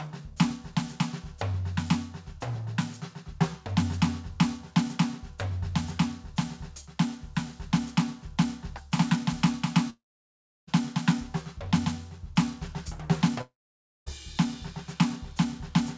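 At 9.90 s the music smears into a brief buzzy tail that fades almost at once, leaving silence until 10.69 s. At 13.41 s the same thing happens, with silence until 14.08 s. Each time the music returns further along, with the gap simply missing. This is a long network dropout, likely from lost packets: the receiver stretched the last sound, then gave up. The band-limited sound, with nothing above 8 kHz, fits the G.722 call codec.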